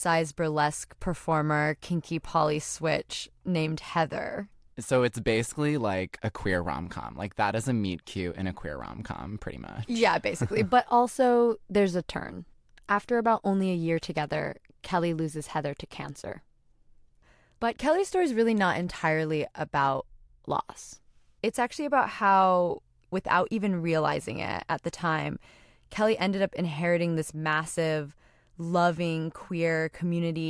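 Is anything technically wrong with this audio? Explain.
No, nothing in this speech recording stands out as a technical problem, so there's nothing to flag here.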